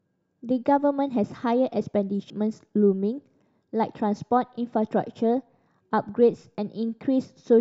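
At 2.30 s the speech gets hit by a burst of damaged data in the compressed stream. Some bytes there were wrong, so the decoder misread the frame, lost sync and had to hunt for the next frame header. You hear it as a short glitchy blip.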